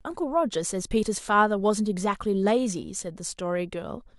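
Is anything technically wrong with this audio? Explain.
No, nothing in this speech recording stood out as a technical problem on listening.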